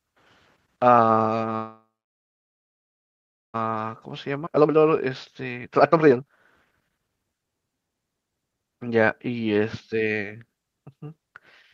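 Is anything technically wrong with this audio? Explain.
Yes, the speech has three network-related playback faults.

From 1.55 to 3.56 s there is a call audio freeze, likely from delayed packets draining the jitter buffer. The last sound is stretched briefly, then about 1.7 s of silence follows. A spectrogram shows a smeared tail and then a blank band, and nothing is lost.

From 3.71 to 7.47 s a jitter buffer speed-up runs the speech at 126% speed while keeping the same pitch. Trimmed pitch periods remove roughly a second, so it sounds hurried. Harmonic spacing stays constant while syllables look compressed.

At 4.46 to 4.48 s a skip ahead drops roughly a second of speech. The two sides are spliced almost directly, which appears as an abrupt waveform join and a sudden spectral discontinuity.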